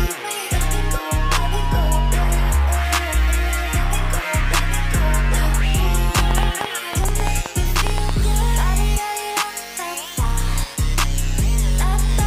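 A train of clicks runs from 6.19 to 8.10 s: about fifteen sharp pulses of much the same shape, arriving at an uneven pace that averages 7.9 per second. Each one jumps out roughly 15 dB above the surrounding sound, so they read as a ragged ticking laid over the audio rather than part of it. The cause is likely interference from nearby equipment or a faulty connection or power supply injecting repeated pulses into the signal path.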